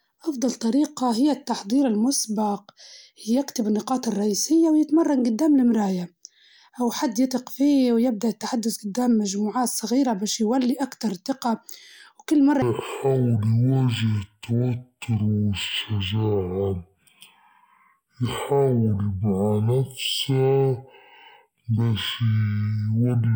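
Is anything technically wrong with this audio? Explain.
Yes. From 12.62 s to the end, just after "وكل مرة", the speech drags at half speed and drops an octave, with a faint mirrored image in the upper spectrum. This is stereo read as mono: interleaved left and right samples play consecutively as one channel.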